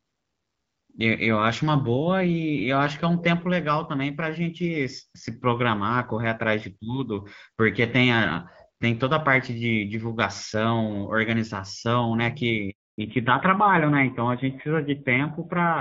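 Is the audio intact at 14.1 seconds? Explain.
No. A fallback to narrowband begins at 12.98 s and lasts to the end at 15.80 s, so 14.1 s falls inside it. The call switches from the HD Voice wideband codec to an older narrowband one, and the dullness that sets in fits a move from AMR-WB at 12.65 kbit/s to AMR-NB at 7.4 kbit/s. Nothing above 4 kHz survives, so the speech loses its crisp upper range and sounds muffled and rougher than the wideband audio before the switch.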